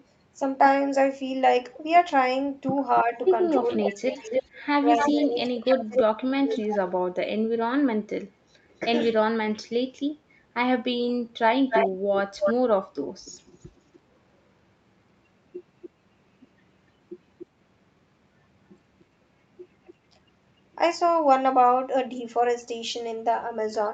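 It's a speech recording from a call, with content stopping at 8 kHz from the microphone processing, and it carries an echo leak: a delayed copy of the voice, around 280 ms behind, comes back at 2.95–6.63 s (about 5 dB under the speech), 8.70–8.75 s (faint), 11.08–13.99 s (about as loud as the speech), 15.82–17.46 s and 19.0–21.11 s (about 20 and 30 dB down). That's likely a loudspeaker-side canceller letting some of its mic pickup through. There's also speech suppressed in double talk, where the talker dips by up to roughly 30 dB across about two seconds within 3.04–6.82 s, plus a brief drop at 11.25–11.31 s, likely as the canceller ducks its own talker along with the loudspeaker echo while they overlap.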